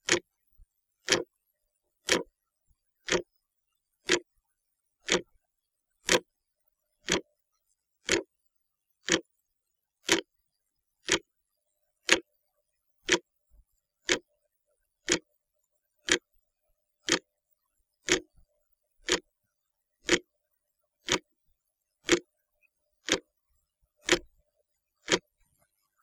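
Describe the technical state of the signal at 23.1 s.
At 23.1 s the signal is intact, with no dropout, distortion or other fault audible at that point.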